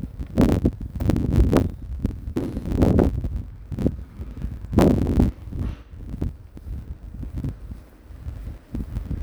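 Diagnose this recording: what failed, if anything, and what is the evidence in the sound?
Block size mismatch (truncated) at the buffer stage: each block's tail is dropped, giving a 92 Hz buzz and 1.07× speed while the timbre stays, unlike a sample-rate error.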